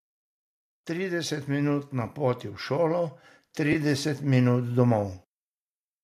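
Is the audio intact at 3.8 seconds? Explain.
No. At 3.8 s the audio is still being lifted by automatic gain rising, which runs from 0.87 s to 5.18 s. The automatic gain control judged the input too quiet and raised its gain gradually, by about 9 dB in total. The speech and the background noise swell together, so the level is still creeping upward at this point rather than holding steady.

Just before that moment, AAC frame loss with concealment hits from 3.73 s to 3.76 s. About 20 ms of audio went missing, which fits two lost frames of a low-delay codec using 10 ms frames, likely AAC-ELD. The decoder patched the gap by reusing and reshaping the last good spectrum, so the gap comes through as a brief smeared, noisy or phasey blip rather than a silent dropout. The audio has recovered from that blip by 3.8 s, but the gain is still rising.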